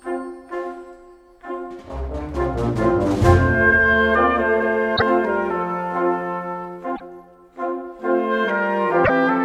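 At 4.96 to 5.02 s, 6.95 to 7.01 s and 9.04 to 9.10 s, the audio jumps ahead. Each jump leaves a corrupted stretch of about 0.06 s. That spans two or three frames of roughly 24 ms. The likely cause is a broken MP3 bit reservoir. Frames were lost, so the next ones looked back for borrowed data and found the wrong bytes. They decode as a short burst of damaged sound before playback settles.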